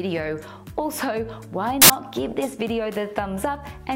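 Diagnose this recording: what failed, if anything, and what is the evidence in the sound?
Samples built from the wrong bytes, at the sample-format conversion stage, between 1.82 and 1.90 s. For those 80 ms the sound gives way to loud, harsh broadband noise. The reader assembled each sample from misaligned or swapped bytes, so the rapidly varying low-order bits landed in the most significant position. Unlike clipping or an analogue crackle, the noise is broadband and swamps the underlying waveform.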